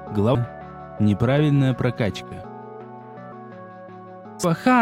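The audio has three short glitches from damaged data in a compressed stream. They fall at 0.35 s, 3.32 s and 4.44 s. Each is a brief chirp, squawk, click or short hole. At these points part of the encoded data was corrupted, through lost, zeroed or overwritten bytes. The decoder could not read those frames correctly. It lost sync and hunted for the next valid frame header, which produced the momentary artefact.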